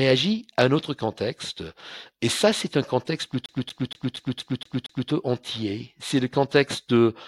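From about 3.46 s to 5.10 s the speech gets caught in a CD stuck on one turn: the pickup keeps jumping back to the same spot, replaying a 234 ms slice seven times, each with a tiny mute at the jump. That gives it that quick, even skipping-disc stutter.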